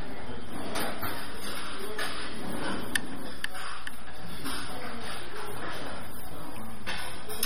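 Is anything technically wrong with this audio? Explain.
Yes, two problems run through the whole clip.

There's a DC offset: the waveform sits shifted off zero by a constant amount. You won't hear it, but it wastes headroom and shows as steady energy at the very bottom of the spectrum.

The watery, swirly smear and softened attacks are plainly audible, with nothing above about 17.2 kHz. That's likely MP3 compression, starved of bits at a rate that fits around 32 kbps, dropping weak detail frame by frame.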